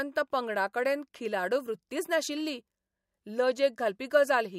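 Nothing in this speech recording stood out as a technical problem on listening.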